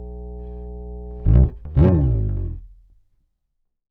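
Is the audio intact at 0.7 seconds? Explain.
No. At 0.7 s the audio carries mains hum, present from the start to 1.5 s. A ground loop or nearby transformer is coupling the 60 Hz power line into the signal, producing a steady low tone with low harmonics, sitting about 15 dB below the signal.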